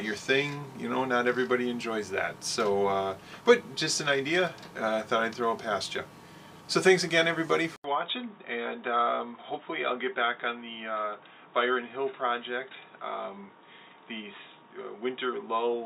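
Input switched to a poorer device at 7.76 s: after an 80 ms gap, the audio turns dull and slightly quieter, with nothing above 3.8 kHz and faint new background noise, likely another microphone.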